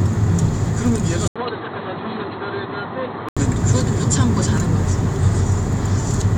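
A recording of sounds where, from 1.28 s to 3.37 s, the audio drops out for 80 ms, then returns dull and boxy with nothing above 4.2 kHz, about 10 dB quieter, over a new noise floor roughly 35 dB down. The likely cause is an input switched to a poorer device.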